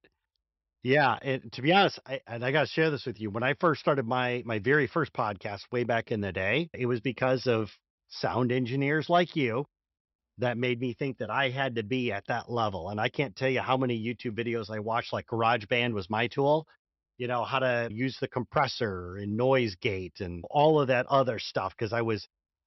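Nothing in this recording of speech stands out as a technical fault, so there's nothing to point to at any moment along the way.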